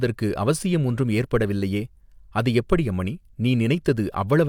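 Nothing stood out as a technical fault on listening to the speech.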